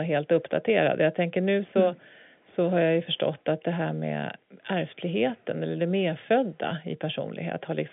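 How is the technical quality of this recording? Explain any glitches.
No glitches: the speech arrives as ordinary G.711 telephone coding, its mu-law line band running from about 150 Hz to 3.5 kHz with nothing above 3.7 kHz.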